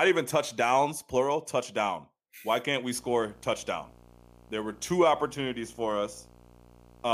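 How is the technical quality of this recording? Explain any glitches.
The recording is marred by one fault, video or display buzz, which starts at 2.96 s, just after "can't we", and runs to the end. A screen or video cable is coupling into the audio path, adding a buzz at the 59.94 Hz field rate with hash above it and a 15.7 kHz line-rate whine, sitting roughly 25 dB below the speech.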